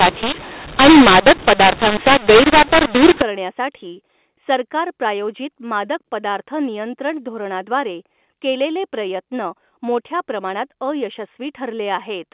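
From the start of the speech to 3.22 s, just before "करण्यासाठी सरकार प्रायोजित", mu-law and A-law are mixed up: samples coded with the mu-law companding curve are being expanded with the A-law curve. The two logarithmic mappings disagree, so sample magnitudes are scrambled, with some too loud and others too small, and near-silent values are pushed well above zero. The result is harsh, gritty distortion with noise filling the gaps. After 3.22 s the stream decodes correctly as 8 kHz mu-law telephone audio.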